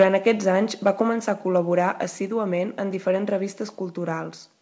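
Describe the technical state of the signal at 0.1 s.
At the start of the clip, from 0.0 to 0.07 s, the signal shows microphone overload. The speech peaks drive about 5 dB past the converter's limit, most likely because the input volume was set too high, so the converter flattens their tops. Around 7 percent of samples in that stretch are clipped. On a waveform the loudest cycles appear as squared-off plateaus. On a spectrogram, broadband streaks spread up to the 8 kHz ceiling of the G.722 call path, and the ear hears them as a harsh, crackly edge on the loudest syllables.

At 0.03 s, during that distorted burst, there is a microphone volume stepped down event. The input gain falls by about 2 dB in a single step, likely the call software reacting to the clipping by lowering the device level. Voice and background both drop together at once. A waveform shows this as a sudden shrink in the envelope with no gradual ramp, and a spectrogram shows a slight, uniform dimming across all frequencies from that instant.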